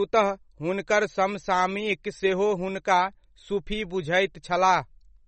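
From start to finish the speech has a hard ceiling, with nothing above 8.4 kHz, and the damage is plainly audible: a watery, swirly texture with chirpy metallic edges on the s sounds and softened consonant attacks. That's likely MP3 compression starved of bits. The encoder chopped off the treble at a fixed point and let weak frequency lines flicker in and out between frames, which fits a low bitrate of around 32 kbps.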